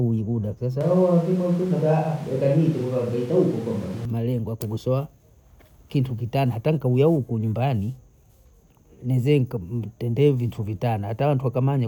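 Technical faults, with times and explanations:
0.81–4.05 s, switch to a distant microphone: the speech abruptly turns roomy and hollow, with thinner bass and a raised floor of room noise around 25 dB below the speech, then snaps back to close, full sound just before "ya kugosowa". The level stays roughly the same. The sudden change in tone at both ends points to a likely failure or omission of the close microphone, leaving a pickup further away that captures more of the room's reflections.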